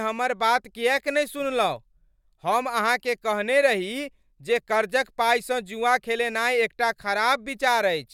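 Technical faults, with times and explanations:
Nothing in the recording stood out as a technical problem on listening.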